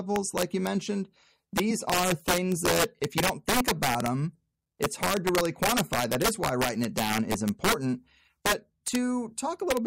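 Integer overflow runs through the whole of this speech recording: the loudest peaks crack violently instead of flattening. The signal was driven about 6 dB past full scale, and rather than being held at the ceiling, each sample beyond the integer limit wrapped around to the opposite extreme. A small share of samples, roughly one and a half percent, crosses that limit, and each one becomes a harsh, sharp crack on the loud syllables, far more abrupt than ordinary clipping.

Compressed frames skipped at 1.70 s, just before "are things that if", make the audio jump forward. Around 20 ms of sound is lost, which fits one or more whole coded frames being dropped, either missing from the stream or rejected by the decoder as corrupt.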